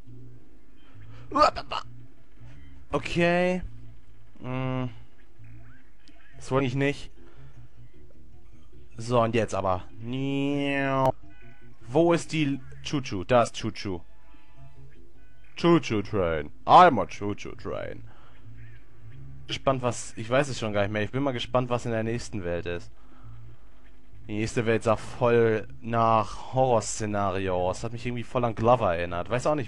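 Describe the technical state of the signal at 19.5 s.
At 19.5 s there is damaged data in the compressed stream, from 19.46 to 19.52 s. Corrupted bytes make the decoder misread those frames and lose sync until it finds the next valid frame header. The result is a brief blip, about 50 ms long.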